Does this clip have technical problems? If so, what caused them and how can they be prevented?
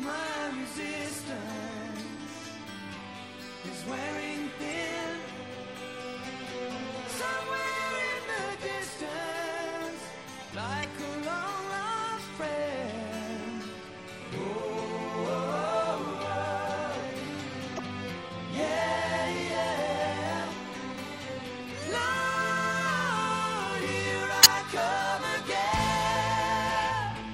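Yes. Throughout, the sound is watery and swirly, with dulled treble and smeared attacks, likely from MP3 compression at a low bitrate, which fits about 64 kbps. Encoding at a higher bitrate avoids this.

Brief glitches occur at 4.69–4.74, 10.80–10.85, 14.78–14.82, 17.75–17.80 and 24.41–24.46 s. These come from damaged data in a compressed stream: corrupted frames make the decoder lose sync and skip to the next header. Checksummed, reliable transfer or storage prevents this.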